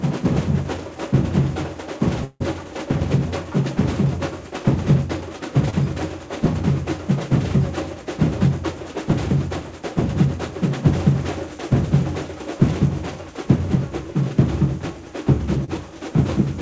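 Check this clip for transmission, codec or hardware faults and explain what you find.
Three transmission faults are present: one long network dropout and two short concealed packet losses. The audio passes through a call path whose codec leaves nothing above 8 kHz, which fits G.722 at 64 kbps.

From 2.24 to 2.42 s there is what is likely a long network dropout. About 160 ms of audio never arrived, so the receiver extended the last sound for roughly 160 ms as a fading buzz or hiss. Near the end there is about 20 ms of silence before the signal resumes, with the lost portion missing.

At 5.70 to 5.74 s there is a short concealed packet loss. About 20 ms of audio failed to reach the decoder in time, and the receiver covered the gap by continuing the preceding sound and blending it back into the real signal. This is heard as a brief smear or wobble. At 15.64 to 15.70 s a similar loss of about 40 ms was covered with 31 ms of synthesised continuation, which gives a slightly longer wobble.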